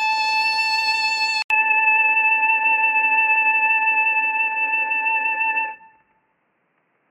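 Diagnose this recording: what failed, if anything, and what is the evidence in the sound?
At the codec stage, the music was likely squeezed through MP3 compression at a starved bitrate, which fits something near 48 kbps. Nothing survives above 15.3 kHz, and weak spectral lines flicker between frames, giving a plainly audible watery swirl and smeared attacks throughout.

At 1.42 s the input likely switched to a poorer device. An 80 ms silence marks the switch, after which the band stops at 3 kHz, the level shifts by a few dB, and a faint new noise floor appears, leaving everything from there to the end dull and boxy.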